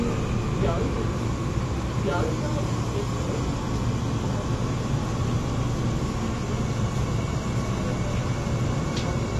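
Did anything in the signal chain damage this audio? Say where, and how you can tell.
Yes. Throughout the clip the sound is dull and smeared, with nothing above about 12.1 kHz and a warbling, fizzy texture on sustained and noisy parts of the audio. The damage is plainly audible rather than subtle. The likely cause is lossy AAC-LC compression at the codec stage. The encoder has dropped the top band and coarsely quantised what remains, which fits a low bitrate of around 32 kbps.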